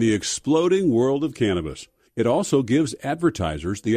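No dropouts, glitches, level jumps or distortion events occur anywhere in this recording.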